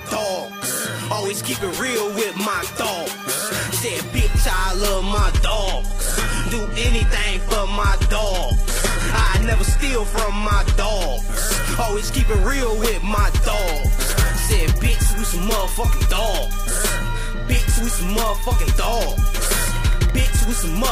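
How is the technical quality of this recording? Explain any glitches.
The recording has one clear glitch: an adaptive stream at a lower bitrate. From 4.96 s to 10.96 s, a six-second stretch, the stream switched to a lower-quality version, then switched back, with no gap at either change. The sound points to a move from about 96 kbit/s AAC down to a low-rate HE-AAC stream of around 16 kbit/s, likely because the connection slowed. During that stretch nothing is heard above 12.3 kHz, the top end thins, and coding artefacts become audible.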